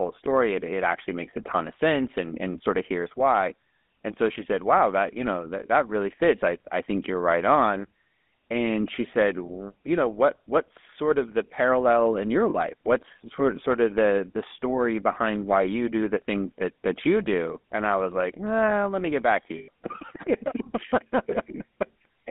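Throughout, the GSM full-rate codec gives the speech a buzzy, gravelly roughness within a 200 to 3500 Hz line band. This grainy pulse-driven texture fits a 13 kbps GSM coder rather than plain band-limiting. Lost GSM frames follow at 12.5 to 12.55 s, after "the parallel in your", and at 19.58 to 19.69 s, after "me get back to". The missing 40 ms and 100 ms were filled by repeating the last good frame. Each gap is heard as a brief metallic ring, unlike the abrupt silence of a dropout.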